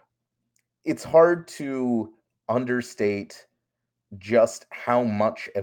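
At 1.37 to 1.39 s and again at 3.07 to 3.09 s, the speech has a lost packet rebuilt from error correction. Each 20 ms stretch, which fits a single lost packet, was replaced with the low-bitrate redundant copy carried in the following packet, so there is no dropout. Those two short frames sound briefly coarser and noisier than the surrounding speech, a momentary roughness rather than a gap or click.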